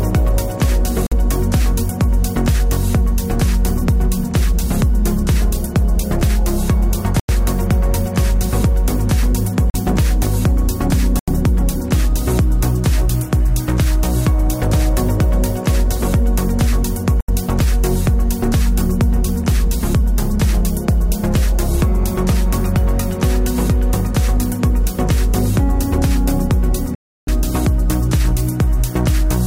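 Bluetooth stalls break the audio six times, at 1.07 to 1.13 s, 7.20 to 7.31 s, 9.70 to 9.75 s, 11.19 to 11.29 s, 17.21 to 17.30 s and 26.95 to 27.29 s, each dropping to silence for 42 to 94 ms, with the last lasting 324 ms, before the sound resumes. The likely cause is radio interference delaying packets until the receiver's buffer emptied, so playback halted until retransmitted data arrived.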